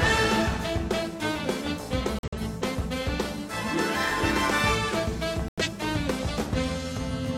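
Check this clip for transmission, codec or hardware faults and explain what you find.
Two dropouts caused by corrupt frame muting. The first runs from 2.19 to 2.42 s. The second runs from 5.48 to 5.69 s. In each, the sound cuts to silence abruptly, then resumes with no shift in timing. Damaged compressed frames were rejected by the decoder, and the player filled their slots with silence. Each hole lasts about a fifth of a second, which fits a run of several consecutive frames rather than a single one.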